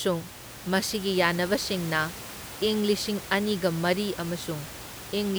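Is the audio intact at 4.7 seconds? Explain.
Yes, the audio is intact at 4.7 seconds, with only the room's own background noise, about 14 dB below the speech, audible there.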